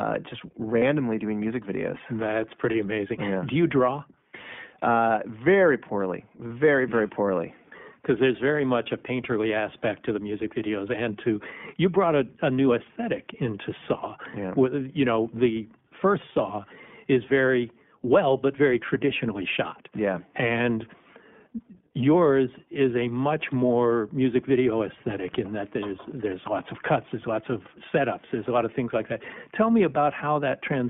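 Throughout, the speech runs through the iLBC codec. The band is limited to roughly 150 Hz to 3.5 kHz, and independent 20 ms frame coding leaves a plainly audible rough, synthetic edge. Lost iLBC frames occur at 0.78 to 0.83 s, 2.72 to 2.75 s, 6.49 s and 27.68 to 27.71 s. The decoder repeats the last pitch cycle mixed with noise, so each gap sounds like a brief held, buzzy or breathy vowel before the speech recovers almost immediately.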